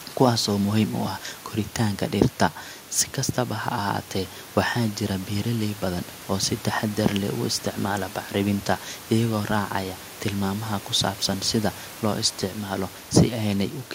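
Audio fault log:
Nothing to log here: the speech comes across without any fault I can hear.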